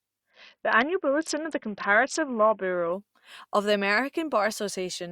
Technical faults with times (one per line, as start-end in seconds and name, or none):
0.30-2.93 Bluetooth SBC bit pool drop